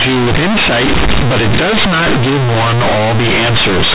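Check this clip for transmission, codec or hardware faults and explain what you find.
One fault runs through the whole clip: companded audio read as linear. The mu-law telephone bytes are played as plain 8-bit samples without expansion, so every sign change swings across half the range. Quiet passages come out as loud as peaks, giving harsh, buzzy distortion and heavy noise in the pauses, over speech that is still limited to 4 kHz by the telephone coding.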